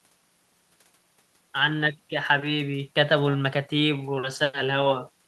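A speech recording with no audible technical faults.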